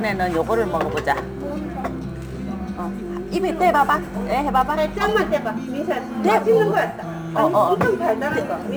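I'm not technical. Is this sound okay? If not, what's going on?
No. Throughout the clip there is sample clock jitter: the timing that paces the recording wobbles by several millionths of a second, so each snapshot lands slightly off. That adds a hiss or roughness that grows on loud, bright moments and disappears in quiet gaps.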